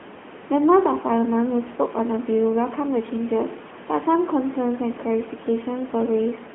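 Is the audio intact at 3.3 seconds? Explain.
No. At 3.3 s the speech sounds thin, buzzy and somewhat synthetic, as it does for the whole clip, with nothing above about 3.8 kHz. This is the AMR narrowband mobile codec at 10.2 kbps, rebuilding the voice from a vocal-tract model and sparse pulses, heard over a 200 Hz to 3.4 kHz line band.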